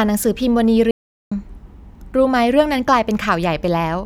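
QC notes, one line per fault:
0.91–1.32 s, audio dropout to silence: the input feed was likely interrupted for about 405 ms, perhaps by a disconnect, a broken link or a brief mute, while the recorder kept writing silence. The speech stops abruptly mid-flow and resumes just as suddenly, with a gap of true dead silence that carries no room tone or background at all, so the speech from that stretch is simply missing.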